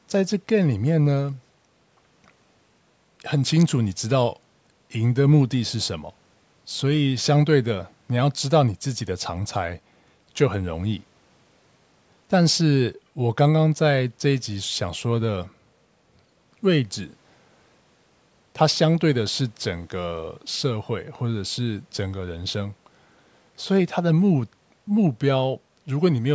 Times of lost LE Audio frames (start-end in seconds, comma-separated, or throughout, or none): none